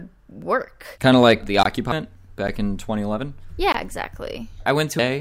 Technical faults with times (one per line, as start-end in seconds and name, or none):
1.63-1.65 block of digital silence
2.47 block of digital silence
3.72-3.74 block of digital silence